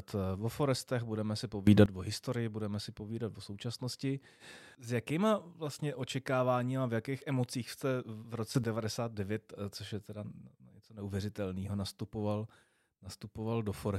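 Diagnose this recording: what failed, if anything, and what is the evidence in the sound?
The speech and its background noise leap together by about 17 dB from 1.67 to 1.86 s, after "forestech budeme si", and by about 12 dB from 8.55 to 8.64 s, after "jakých emocích jste v". This sudden gain jump likely comes from a digital gain stage stepping instantly, without a ramp.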